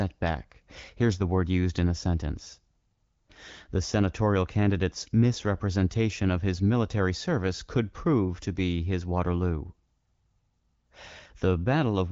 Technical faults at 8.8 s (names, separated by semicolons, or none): none